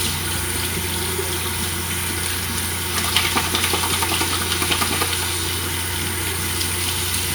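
No technical faults can be heard in this recording of sounds. There is no moment in it that needs a time marked or a fault described.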